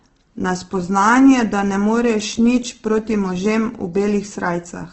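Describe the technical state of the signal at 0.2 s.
Opus compression runs throughout, including 0.2 s: nothing above 8.2 kHz, and noise-filled bands sound grainy rather than MP3-like swirling, likely from a bit-starved CELT encode near 12 kbps.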